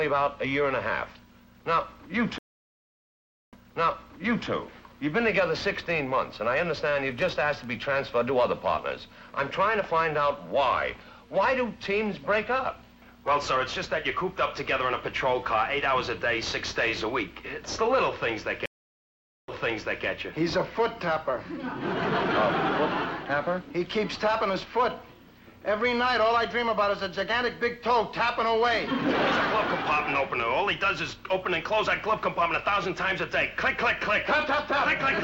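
Two stream reconnects break the audio, at 2.38 to 4.49 s and 18.66 to 20.06 s. Each time the connection drops, the player falls silent for about 1.14 s and then 0.83 s, and a new decoder picks up mid-stream at a point 0.96 s and then 0.58 s earlier, so material repeats. On a waveform each shows as a flat gap followed by a muted or ramped restart. A spectrogram shows a blank vertical band and then a duplicated stretch.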